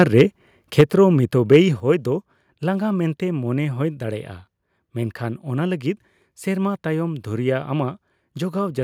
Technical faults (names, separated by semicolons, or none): microphone overload; microphone volume stepped down